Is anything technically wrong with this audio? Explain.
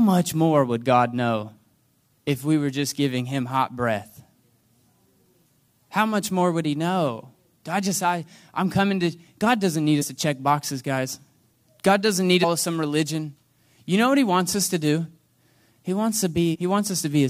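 Yes, there's damaged data in the compressed stream, showing up three times in this speech. You'll hear short glitches at 10.01 to 10.03 s, right after "god doesn't need" and before "to check boxes guys"; at 12.43 s, after "god doesn't need" and before "some religion you know"; and at 16.54 to 16.56 s. Each time, corrupted bytes throw the decoder off. It spits out garbage briefly, then resyncs on the next good frame header.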